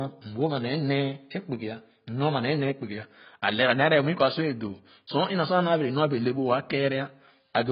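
A speech recording with heavy AAC compression damage running throughout: nothing survives above 5.1 kHz, and what remains sounds dull and smeared, with a warbling, fizzy texture on sustained sounds and sibilants. That texture is what separates it from a plain low-pass filter or telephone band-limiting, which would be cleanly muffled. The heavy damage points to an AAC-LC encode at a very low bitrate, likely around 16 kbps, where the coder lowers its cut-off and starves the spectrum.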